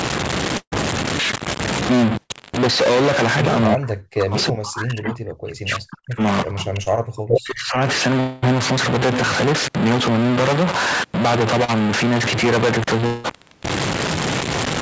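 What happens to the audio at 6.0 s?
At 6.0 s the speech sits inside a short concealed packet loss running from 5.99 to 6.05 s. Roughly 40 ms of the stream never reached the decoder in time, and about 34 ms of that gap was filled by the receiver extending the preceding sound, carrying on its pitch where voiced and shaped noise where not, before crossfading back into real audio. It comes through as a brief smear or wobble, and any short consonant there can drop out.

The same moment falls near the end of a stretch from 3.75 to 6.23 s where the speech level sinks, at its deepest by about 40 dB, over roughly two seconds in total. The likely cause is speech suppressed in double talk: with both ends talking at once, the echo canceller could not tell the near talker from the loudspeaker echo and attenuated the near-end signal along with it.

Underlying all of this is a distortion present across the whole clip, with pauses filled by a steady noise floor instead of silence. 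That pattern points to a stuck bit, likely one sample bit held at 0 or 1 by a faulty line or converter, so that about half the sample values are offset by that bit's weight, and because the stuck bit changes with the sign of small values, quiet passages fill with audible noise.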